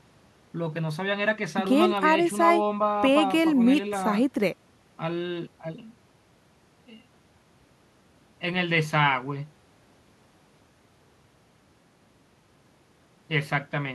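Listening to the speech here, nothing stood out as a technical fault at any point.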